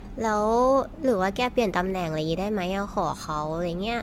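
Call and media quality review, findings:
Generation loss across the whole speech clip, start to finish. It sounds swirly and hollow, with smeared consonant attacks and nothing above 17 kHz. Way more mush than a single 96 kbit/s AAC-LC pass should give. Likely cause is repeated transcode, something like ten AAC-LC decode/re-encode rounds somewhere in the chain. Each pass re-quantises on a shifted frame grid, so the noise and spectral holes keep stacking.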